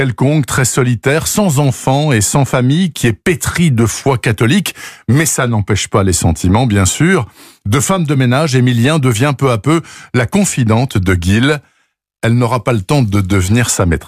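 Nothing goes wrong anywhere in this speech recording, so there's no fault to point to.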